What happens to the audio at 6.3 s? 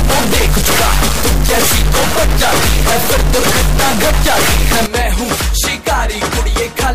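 At 6.3 s the audio plays through intact, with no dropout, click, distortion or other fault at that point.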